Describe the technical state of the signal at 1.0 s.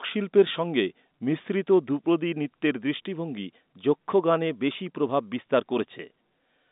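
At 1.0 s the audio is intact, with the speech carried cleanly through G.711 telephone coding and its band topping out below about 3.8 kHz.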